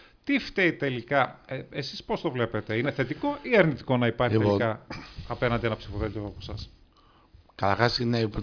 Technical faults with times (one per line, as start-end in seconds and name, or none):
none